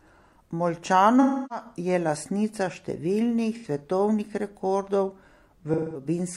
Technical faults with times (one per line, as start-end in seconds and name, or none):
1.21-1.65 AAC frame loss with concealment
3.55-3.66 AAC frame loss with concealment
5.73-6.05 AAC frame loss with concealment